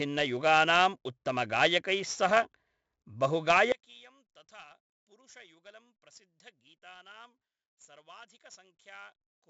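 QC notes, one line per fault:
Throughout: 4-bit ADPCM compression. Gritty hiss rides every loud syllable, harsh on attacks; nothing above 7.7 kHz, consistent with 64 kbps heavy coding.
3.72 s to end: one channel inverted. Speech drops by about 26 dB to a faint remnant, likely from reversed polarity cancelling the centred voice in mono.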